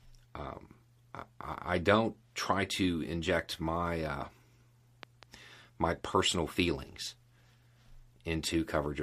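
At 5.03 s a loud pop breaks into the speech, two sharp thumps within about a fifth of a second, ending by 5.25 s, just before "my personal feelings". The speech carries on beneath them. The cause is likely a sudden voltage step or pulse, from a plug, switch, static or driver glitch, entering the signal path. On a waveform each pop is a spike standing about 10 dB above the speech. On a spectrogram each shows as a thin vertical stripe spanning the whole frequency range.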